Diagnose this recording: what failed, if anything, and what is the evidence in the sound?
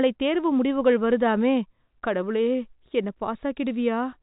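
Nothing in the speech points to a failure at any stage: the band ends near 3.8 kHz, as G.711 telephone coding would leave it, consistent with a 64 kbps A-law path, and any quantisation noise beneath the speech is at most faint.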